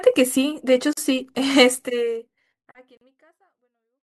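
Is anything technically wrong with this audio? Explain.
Yes. There are gaps at joins of encoded pieces at 0.93 to 0.97 s and 2.97 to 3.01 s, each about 40 ms long and 2.0 s apart. The speech seems to have been encoded in separate two-second pieces and joined without trimming, so each join keeps one encoder's end padding and the next one's start-up delay. Mid-phrase, the sound drops out abruptly with smeared edges, then resumes where it stopped. The smooth fade-out running from about a second and a half to 4.08 s is not part of the fault.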